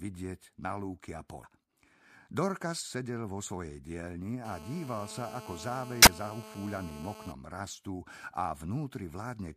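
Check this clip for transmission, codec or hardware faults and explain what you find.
Two kinds of fault turn up in this speech clip: a couple of corrupted stretches in the compressed stream, and a phone interference buzz sitting over the middle section.

The damaged data in a compressed stream shows up at 1.40–1.44 s, right after "na lúky a", and again at 6.02–6.07 s. Bad bytes there throw the decoder out of sync while it hunts for the next frame header, so you get a short chirp, click or hole in the audio.

The GSM phone buzz runs from 4.45 to 7.32 s, starting just after "vo svojej dielni". A 2G handset on a call is pulsing at about 217 Hz, and the audio circuitry rectifies those bursts into a hard, raspy, harmonic-rich buzz. It stays nearly steady, at about 11 dB below the speech.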